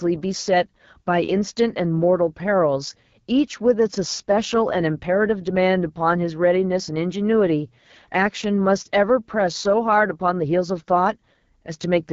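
From start to end the speech carries the sound of the AMR wideband (HD Voice) codec at one of its lowest rates, which fits 8.85 kbit/s. With so few bits for the pulse-driven vocal tract model, the voice turns plainly rough and raspy. On a spectrogram, harmonics stop near 6.4 kHz. Above that, a band of smeared noise without harmonic structure runs to a hard ceiling at 7 kHz, with nothing beyond it.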